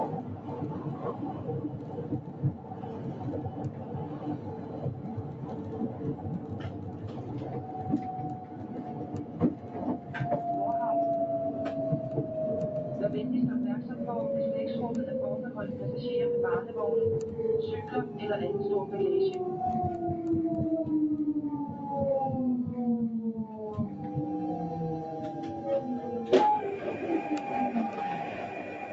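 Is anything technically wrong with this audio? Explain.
Yes. A noise suppressor built for speech was left running on this material, so the audio does not hold a steady level. The audio passed through a call path with a bandwidth of about 8 kHz.

Noise suppressor applied to music or sounds: Throughout the clip, the suppressor keeps treating sustained parts of the sound as noise and pulling them down, with the loss swinging by around 10 dB. Sudden onsets mostly pass through, but the parts that hold or fade are pushed back. The result is a pumping, unsteady level, with the sustained body and tails thinned and fluttering instead of settling.

Sound cut by the noise suppressor: At 0.23–0.48 s, 1.72–3.21 s, 3.7–3.92 s, 4.38–5.42 s, 5.9–7.22 s, 8.45–8.68 s, 9.25–10.1 s and 23.16–23.6 s, the suppressor mistakes the sound itself for noise and attenuates it harder than the surrounding material. The deepest drops are about 5 dB, and about 4 dB in the last case. 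In these spans the sound sinks in level or its decay is cut short.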